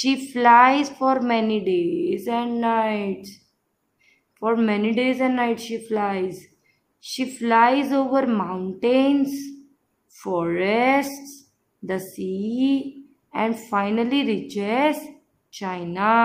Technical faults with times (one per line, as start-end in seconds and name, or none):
none